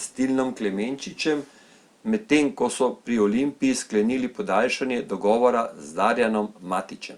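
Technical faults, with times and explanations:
0.09–0.16 s, 1.17–1.23 s, 1.83–1.87 s, echo leak: short, very faint copies of the speech return 257–279 ms late, likely a speakerphone's echo canceller leaving residue.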